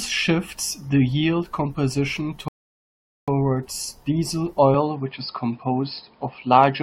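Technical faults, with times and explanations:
2.48 to 3.28 s, rebuffering stall: playback halts into silence for about 0.8 s, then picks up exactly where it left off. The player ran out of downloaded audio and waited for more to arrive, so nothing is missing but the clip runs longer.
4.74 s to the end, input switched to a poorer device: the speech turns duller from here on, with nothing above 5.2 kHz. The change comes without a gap and at a similar level, bringing a faint new noise floor, likely from the system moving to a narrower-band microphone or headset profile.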